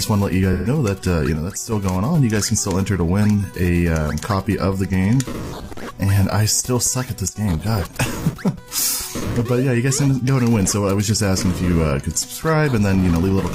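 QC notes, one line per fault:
0.53–0.68 s, AAC frame loss with concealment: 128 ms of coded audio went missing. The decoder filled the gap by reusing the last good spectrum with altered phase and energy. So the patch sounds smeared and noisy, not like a clean dropout.
1.36–1.72 s and 7.28–7.36 s, sudden gain jump: The level drops abruptly by about 6 dB, then by about 12 dB. The background noise drops along with the sound. A gain setting was likely applied in one step with no ramp, so each drop arrives instantly.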